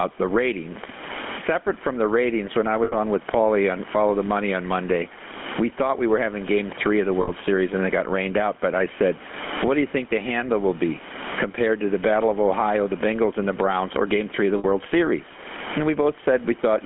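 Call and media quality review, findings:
Gain pumping throughout: room background swells in pauses and ducks under each loud syllable, about 25 dB swing, dynamics squashed. Likely excessive mic gain driving a fast limiter. Unlike a noise gate, the gaps never go silent; the background rises instead.

GSM full-rate codec throughout: buzzy, gravelly roughness on voiced sounds, band roughly 200 Hz to 3.4 kHz, which fits a 13 kbit/s full-rate encoder. Plain narrowband filtering sounds dull but clean; this has the coarse pulse-excitation grain.

Lost GSM frames at 2.84–2.95 s (80 ms, after "the ratings when I", before "on with"), 7.22–7.30 s and 14.58–14.65 s (60 ms each, both after "of the"). The sound is held as a metallic ring rather than a silent dropout, which fits three to four repeated frames.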